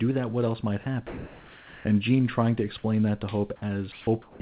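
From 1.07 to 1.85 s, 3.92 to 4.07 s and 4.22 to 4.4 s the background turns into flat, featureless hiss, about 1 dB quieter, then about 8 dB in the last gap. This is comfort noise in place of the background, likely from discontinuous transmission replacing real pauses on a narrowband line with nothing above 4 kHz.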